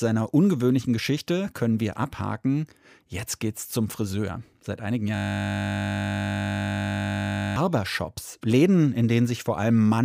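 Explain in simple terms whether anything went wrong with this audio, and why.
The computer briefly froze from 5.16 to 7.56 s, a system hang loop, while the sound hardware kept replaying the same 20 ms slice of audio. Repeating 50 times a second, that tiny slice turns the speech into a steady, flat buzz.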